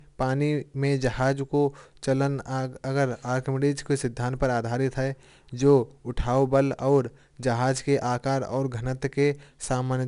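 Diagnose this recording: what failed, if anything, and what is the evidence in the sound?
The codec stage is at fault here: 4-bit ADPCM compression across the whole speech clip. A gritty hiss rides on every loud syllable and sharp onsets crunch where the step size can't keep up. Nothing sits above 10.6 kHz, which fits a 22 kHz sample rate at about 88 kbps.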